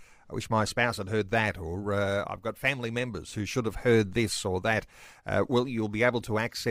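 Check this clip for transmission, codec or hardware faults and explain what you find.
No transmission, codec or hardware faults can be heard in this speech recording, and the signal comes through intact with no dropouts, distortion or interruptions.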